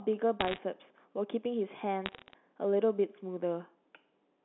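From 0.41 to 0.58 s, crackle sits over the speech. These are bit errors on a digital phone line. Single bits in the mu-law stream were flipped, roughly one in a hundred. Each flip corrupts one sample, and hits on the top bits or on the sign of loud samples snap out as sharp ticks. A second, thinner burst runs from 2.06 to 2.33 s, at a lower error rate. The narrow 250 Hz to 3.5 kHz telephone band stays intact under both.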